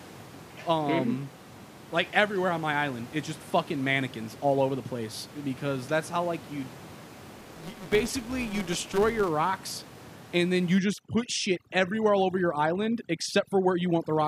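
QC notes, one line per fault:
7.38 to 9.30 s, filter restarted on every block: a steady tick-buzz runs under the speech up to "rocks and then you", riding the signal's level and dropping back as it quietens. The filter loses its memory at each block boundary and starts again from zero, so every block opens with a small transient. The repeat rate near 188 Hz fits a 256-sample block. On a waveform, evenly spaced spikes sit at each boundary; a spectrogram shows thin vertical lines at that spacing with a harmonic comb from 188 Hz upward.
10.79 to 14.27 s, overdone noise removal: after "rocks and then you" the background drops to near silence scattered with twinkling specks. The noise reducer is set far too strong, so any frequency band that falls close to its noise estimate is pushed right down or switched off, and the quieter parts of the speech go with it. A spectrogram shows a dark floor speckled with isolated bright dots and ragged, patchy harmonics with gaps; on the waveform the pauses flatten almost to zero. 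The room noise, about 17 dB below the speech before this point, is all but gone here.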